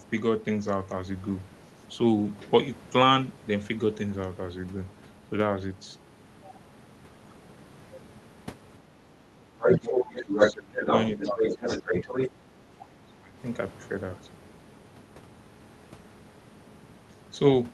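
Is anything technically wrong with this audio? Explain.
Yes. Two related faults occur between about 9.5 and 13.4 s.

Speech suppressed in double talk occurs at 9.49–10.4 s, 10.68–10.87 s, 11.16–11.64 s, 11.8–12.15 s and 13.05–13.38 s. The talker's speech dips by about 10 to 20 dB and breaks up. The likely cause is the echo canceller turning everything down while both sides spoke at once.

The other side's voice leaks through at 9.63–9.88 s, 10.16–12.29 s and 12.79–12.88 s. It is loudest in the first burst, slightly above the talker. In the long stretch it is roughly level with the talker. The last scrap is faint. The likely cause is loudspeaker echo the canceller failed to remove. Through the Opus call path, all of it tops out near 12 kHz.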